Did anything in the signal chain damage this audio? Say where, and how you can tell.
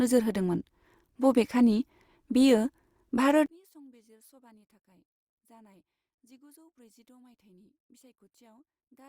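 Yes. From 3.46 s onward the speech drops about 33 dB to a faint residue, likely one channel inverted in analogue wiring and cancelling in mono, unlike a silent dropout.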